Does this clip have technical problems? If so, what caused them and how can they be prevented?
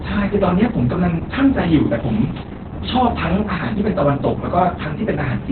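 Yes. Opus voice compression runs throughout this speech: nothing survives above 4.3 kHz, and the voice sounds muffled, hoarse and faintly robotic. That points to SILK narrowband coding at a bitrate that fits about 8 kbps, with the excitation coded very coarsely. A plain low-pass filter would dull the top without adding that grainy, synthetic roughness. To prevent it, encode at a higher bitrate, roughly 16 to 24 kbps or more, so Opus keeps wideband audio.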